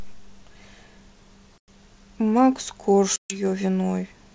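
Hard silent gaps at 1.58 to 1.69 s and 3.16 to 3.40 s, with slightly distorted resumption, show packet loss on an ADPCM call, desynchronising the decoder's predictor.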